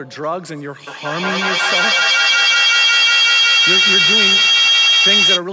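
From 0.87 s to 5.45 s, a feedback howl develops because two devices in the same room are joined on the call, so sound from one loudspeaker reaches the other microphone and returns with more gain each round trip. The repeats never decay. They narrow to a piercing tone around 3 kHz, repeating roughly every fifth of a second, and climb to about 10 dB above the speech. The call's band-limited microphone path keeps everything below 8 kHz.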